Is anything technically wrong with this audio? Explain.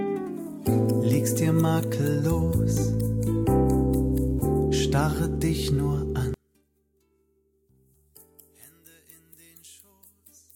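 Yes. From 6.34 s to the end, the sound abruptly drops by about 31 dB to a faint residue, which is the signature of one channel inverted and then summed to mono, the likely cause. With one side's polarity flipped, everything common to both channels cancels, leaving only their small difference. On a waveform the amplitude collapses at 6.34 s; a spectrogram shows only weak energy remaining.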